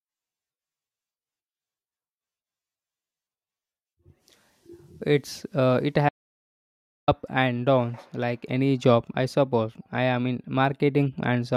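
At 6.09 s the speech drops out to dead silence until 7.08 s, losing about 0.99 s; likely the input was lost while the recorder kept writing silence.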